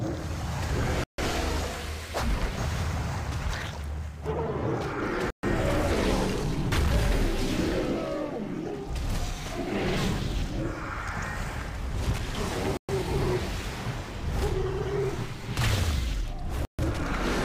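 A likely Bluetooth stall, with packets held up until the headphones' buffer ran dry, cuts playback to silence four times: at 1.04 s for 145 ms, 5.30 s for 129 ms, 12.77 s for 117 ms and 16.65 s for 138 ms, each gap resuming abruptly.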